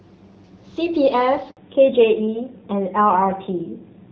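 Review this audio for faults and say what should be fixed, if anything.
Handover gap, 1.51 to 1.57 s: the speech cuts out for 60 ms and then resumes. While the call was being moved from one network to another, no speech frames reached the receiving end. The decoder had nothing to play, so the signal died away into silence until the new link began delivering audio. Whatever was said in that window is lost, not concealed. Prevention: use make-before-break handover so the target link carries frames before the original one is released.

Fallback to narrowband, 1.57 s to the end: directly after the gap, all content above 4 kHz disappears and stays gone. The speech turns duller and rougher. Before the switch, the wideband path sounds clean with only light coding damage, which fits AMR-WB (HD Voice) at 12.65 kbit/s. The new side negotiated a narrowband codec, and the sound points to AMR-NB at around 7.4 kbit/s. 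Prevention: ensure the target network supports AMR-WB and that the handover keeps the wideband codec instead of renegotiating down.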